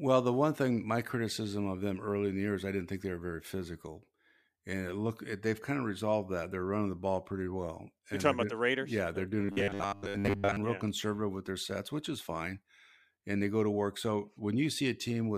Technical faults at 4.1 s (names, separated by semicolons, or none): none